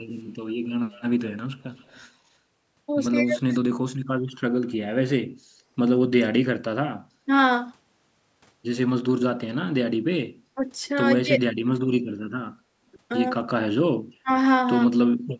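From 0.69 to 2.01 s, a faint delayed copy of the speech trails it by 189 ms, about 30 dB down. This is echo leak. The far end's echo canceller likely let part of its loudspeaker pickup through and sent it back. A second short scrap of the same echo returns from 3.39 to 3.56 s.

Around 3.26 to 3.51 s the speech dips by roughly 10 dB in brief pieces. This is speech suppressed in double talk. With both sides talking, the canceller likely mistook the talker for echo and turned everything down.

At 5.36 to 5.54 s the room sound drops by about 11 dB for roughly 150 ms, then returns. This is background gated by the echo canceller. It clamped the microphone hard while the loudspeaker played. The same dip recurs from 12.61 to 12.81 s.

Double-talk suppression strikes harder later. From 10.55 to 11.42 s the speech loses up to roughly 20 dB in chopped pieces. From 13.46 to 14.3 s it cuts deeper, by roughly 30 dB. 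Both sides speaking at once is the likely cause each time.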